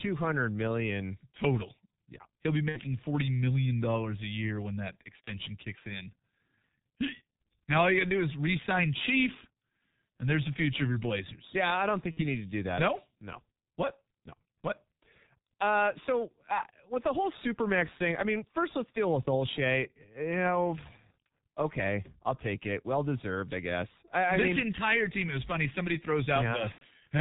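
Speech heard throughout through the G.723.1 codec, heavily damaged. The voice is muffled and hoarse, with soft, smeared consonants, and the low-detail quality fits the 6.3 kbit/s mode. The codec describes the voice in 30 ms frames and updates that description slowly, so rapid changes blur together. On a spectrogram, energy stops at a hard ceiling near 4 kHz, and formant bands look coarse and stepped. Four dropouts show VoIP packet loss concealed by the speech codec: 2.69–2.80 s, 5.24–5.32 s (between "when that" and "kicks in"), 12.11–12.20 s (between "I don't" and "you need to do"), and 26.72–26.83 s. Their lengths fit two, one, two and three missing 30 ms frames. In each gap the decoder keeps repeating the last pitch and filter while lowering the gain, so the voice turns into a short buzzy tone or coloured noise that fades. The spectrogram shows flat, unchanging patterns that dim, and the waveform envelope decays smoothly. 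The voice stays weakened briefly after each gap before the decoder recovers.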